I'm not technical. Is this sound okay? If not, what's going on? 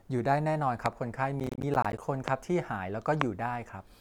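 No. There are two kinds of fault.

First, three loud pops, at 0.86 s, 2.28 s and 3.21 s. Each is a single sharp pop, well above the speech, and the last one is the loudest. The speech carries on underneath. A loud pop like this is likely caused by a sudden electrical jolt, such as a plug, a switch or static. It adds a quick spike to the sound.

Second, processor overload crackle, from 1.40 s to 1.98 s. The computer was too busy to keep up. Audio is handled in tiny chunks, each about a hundredth of a second long. Around twenty chunks over that stretch arrived too late. Each late chunk became a short hole of silence with hard edges. Together those holes sound like gritty crackling over the speech. It stops once the computer catches up.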